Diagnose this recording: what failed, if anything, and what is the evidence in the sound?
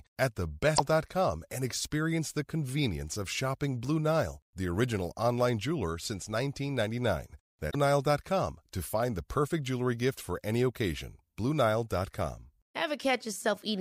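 The failure is at the codec stage: damaged data in a compressed stream. The speech is broken briefly twice, from 0.75 to 0.80 s and from 7.69 to 7.75 s, each about 50 ms. Corrupted bytes made the decoder misread those frames and lose sync until it found a valid frame header. A clean dropout would be silent, and packet-loss concealment would smear the sound; these breaks come from the decoder misreading bad data.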